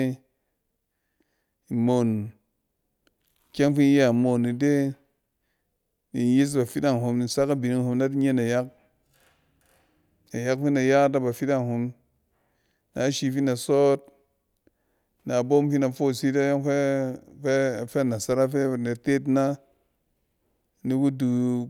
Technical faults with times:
none

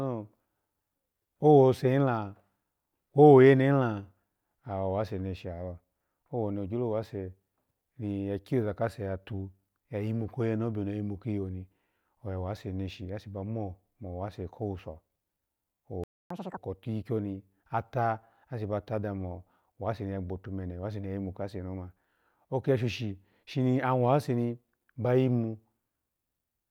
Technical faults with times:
16.04-16.30 playback stall
16.30-16.57 catch-up at higher speed

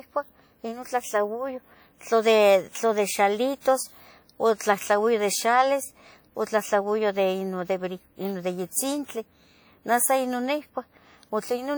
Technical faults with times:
0.00-11.77 WMA compression

